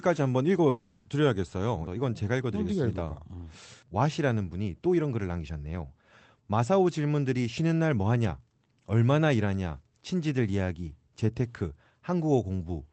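From 0.69 s to 1.07 s the speech breaks off and the last sound before the break is drawn out into a buzzy, hissy tail that fades over about 0.36 s. There is no stretch of true silence. The speech then resumes with that portion simply gone. This is likely a long network dropout: no packets reached the receiver for that span, so the concealment stage kept extending the final sound until audio arrived again. With the audio band topping out around 8 kHz through the call codec, the filled tail sounds dull as well as smeared.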